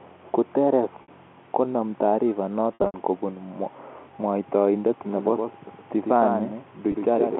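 Packet loss with pitch repetition hits at 1.02 to 1.08 s, just before "konem tarifa": about 60 ms of audio goes missing, and the receiver fills it by repeating the last pitch period, giving a brief held buzz.

The same packet loss with pitch repetition returns at 2.74 to 2.94 s, right after "konem tarifa". Here 160 ms is lost across a 200 ms stretch, with the longest gap 80 ms, so the repeated period fades toward silence before the sound cross-fades back.

From 5.11 s to the end, a doubled audio track runs under the original. A full-band copy about 5 dB quieter trails by roughly a tenth of a second, with no room colour. It likely comes from the signal being captured a second time along a slower path.

A final packet loss with pitch repetition at 6.92 to 6.94 s drops about 20 ms, heard as a tiny buzzy hold. The lost spans fit 20 ms packets.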